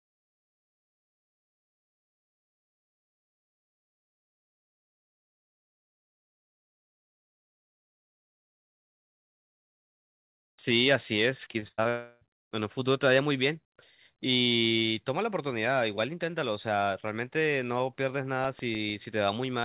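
Repeated packet loss (robotic sound) runs from 11.44 to 11.87 s. Five gaps, the longest about 98 ms, are patched by stretching the preceding sound, giving choppy speech with pieces missing.

A long network dropout, likely the cause, follows at 11.89 to 12.23 s. About 0.32 s of missing audio is replaced by a continued buzzy smear without falling fully silent.

CD scratch ticks appear from 18.14 to 19.20 s: eight brief ticks, each a few milliseconds, recurring roughly seven times a second as unrecoverable data is interpolated or muted. Throughout, the telephone-band path leaves nothing above 4 kHz, consistent with G.711 mu-law.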